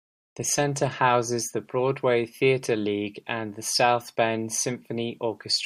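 A speech clip carrying low bit depth without dither the whole way through, likely a 10-bit rounding with no noise added first. The error tracks the voice, so quiet tails go gritty, with the grain sitting about 50 dB below the signal.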